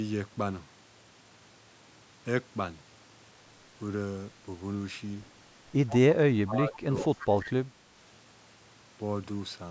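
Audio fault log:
5.88–6.00 s, 6.73–6.79 s and 6.98–7.27 s, echo leak: a faint delayed copy of the voice trails the original by 125 ms. It is about 15 dB below the speech in the first and third bursts and roughly 30 dB down in the second. The likely cause is an echo canceller on a loudspeaker end letting some of its microphone pickup through and sending it back. Reverberation would give a smooth decaying tail. This is a discrete repeat at a fixed delay, arriving in short scraps.
6.45–7.78 s, speech suppressed in double talk: across this span the talker's level dips, by around 25 dB at its deepest, for about a second in total. The likely cause is that both sides spoke at once and the echo canceller, unable to separate the local talker from loudspeaker echo, turned everything down. Dropouts from packet loss arrive as clean gaps or glitches. These ducks follow the overlap, and echo scraps still leak through within the same stretch.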